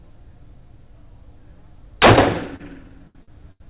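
Four short stalls from a late packet fall near the end, at 2.56 s (33 ms), 3.07 s (74 ms), 3.23 s (48 ms) and 3.52 s (84 ms). Each time the jitter buffer ran dry, so the last sound was stretched until the packet arrived, and playback then resumed where it stopped. Unlike packet loss, nothing is skipped. You hear a held sound with a slight buzz or dip rather than a gap or jump, in sound that the call codec already limits to below 4 kHz.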